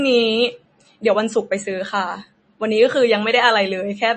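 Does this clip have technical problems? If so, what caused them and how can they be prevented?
Yes. MP3 compression damage is plainly audible throughout. Nothing is heard above 8.3 kHz, and the speech sounds watery. The likely cause is a starved encode, fitting about 32 kbps. The encoder cut the treble and switched weak frequency lines on and off. Encoding at a higher bitrate would prevent it.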